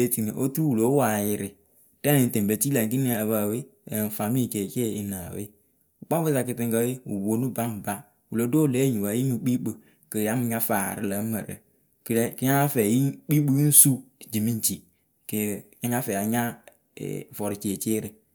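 No technical faults are audible.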